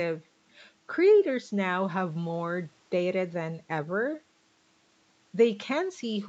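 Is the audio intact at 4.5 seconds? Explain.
Yes, the speech at 4.5 seconds is intact, with only the normal bass trimming of call microphone processing and no content above 8 kHz.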